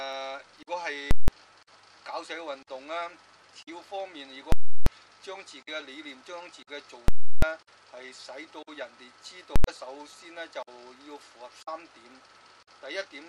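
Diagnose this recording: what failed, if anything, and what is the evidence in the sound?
Invalid numbers at full scale, in the processing stage feeding sample-format conversion. Loud pops bracket silent gaps at 1.11–1.28 s, 4.52–4.86 s, 7.08–7.42 s and 9.56–9.64 s. A calculation returned infinite or invalid values that were pinned at full scale for whole blocks, consistent with 4096- to 16384-sample buffers.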